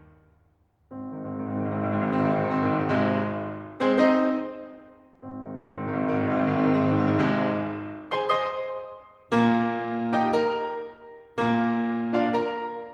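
From 5.13 to 5.47 s the music turns choppy. This is repeated packet loss, giving a robotic sound. Four short holes, the longest about 40 ms, are patched by stretching the preceding sound. Roughly 29 percent of that span is filled rather than real.

At 5.55 s the music gives way to a smeared continuation of the last sound. It lasts 220 ms, to 5.79 s, with no silence. The music then resumes with that stretch lost. A long network dropout is the likely cause.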